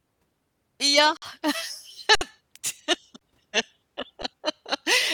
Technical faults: underrun with held sample; short concealed packet loss

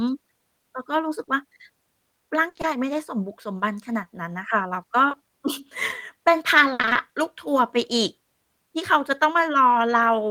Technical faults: short concealed packet loss; burst of packet loss; repeated packet loss (robotic sound)

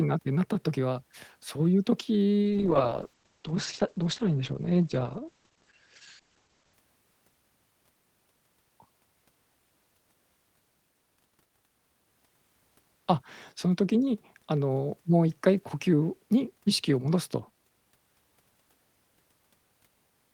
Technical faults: call bitrate drop

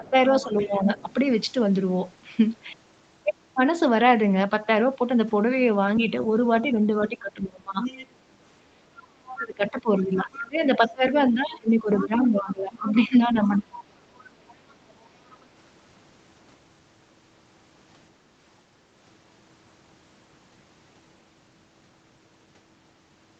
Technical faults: speech suppressed in double talk; other side's voice leaking through

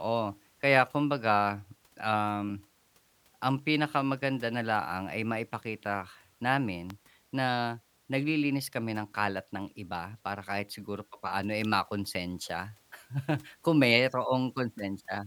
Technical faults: electrical switching spike

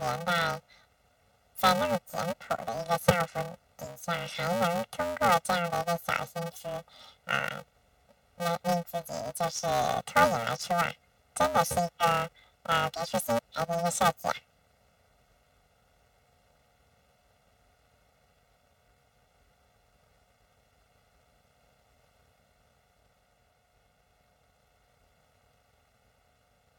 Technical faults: planar audio read as interleaved

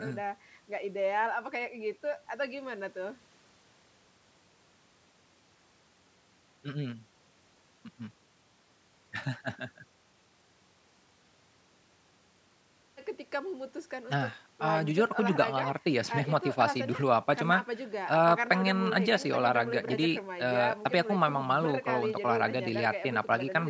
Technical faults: none

